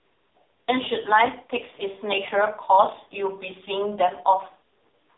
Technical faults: AMR narrowband mobile codec

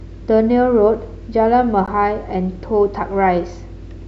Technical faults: block of digital silence

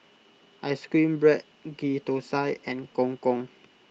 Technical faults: call bitrate drop

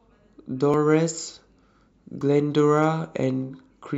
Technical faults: dropped buffer (overrun); hard clipping

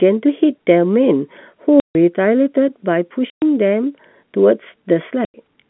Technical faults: packet loss filled with silence

